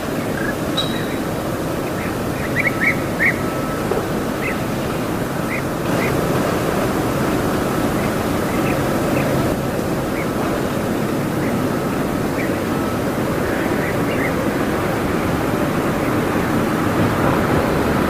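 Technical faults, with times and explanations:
2.45 s, damaged data in a compressed stream: a short blip cuts across the sound. Corrupted bytes in the compressed data made the decoder misread the frames at that point and lose sync until it found the next valid frame header.
5.89 to 9.53 s, doubled audio track: a second, equally loud copy of the sound trails about half a second behind, dry and full-band, appearing and vanishing abruptly. This likely comes from the same audio being mixed in twice through a slower path or a misaligned edit.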